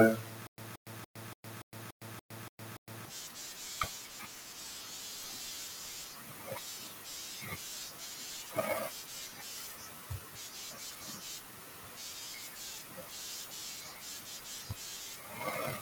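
Speech, with stutter with silent gaps from 0.47 to 3.06 s: a 177 ms fragment repeats nine times, each followed by about 110 ms of digital silence, likely a stalled player retrying.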